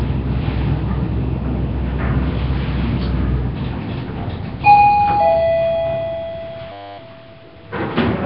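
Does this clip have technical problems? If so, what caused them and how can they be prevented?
Yes, two problems. The whole clip sounds rough and hissy, with a smeared, underwater quality and nothing above about 5.3 kHz. That's heavy codec damage, most likely from Nellymoser compression, Flash's old microphone codec. It spends a fixed two bits per sample on blocks of 256 samples, so weak bands get no bits and are filled with noise. The damage level suggests a bitrate somewhere around 22 kbps. To prevent it, record or export through a modern codec like Opus or AAC at a decent bitrate, or keep it as PCM.

The second is a system hang loop from 6.72 to 6.98 s. A 10 ms slice of audio repeats exactly, about two dozen times, so you hear a steady 100 Hz buzz instead of the real sound. The machine or driver froze while the audio hardware kept cycling the same tiny ring buffer, and roughly a third of a second of real audio was lost. 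To prevent it, fix the driver or system stall and give the audio thread priority, or use larger buffers that don't underrun.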